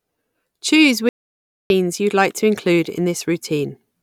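The input feed to the recorder was most likely interrupted for a moment by a lost connection or a brief mute, and the recording carried on filling the gap with silence. That shows up as an audio dropout to silence from 1.09 to 1.70 s: the speech cuts off mid-flow, about 0.61 s of dead silence follows with no room tone at all, and the speech resumes abruptly at "you'd like to include", with whatever came in between gone.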